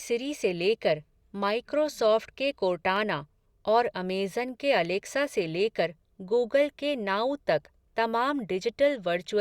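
At 2.96 s and again at 5.24 s, just before "से लेकर गूगल के", a single sharp click is heard, most likely dropped samples: a handful lost, so the waveform jumps. Unlike a dropout, no audible sound goes missing.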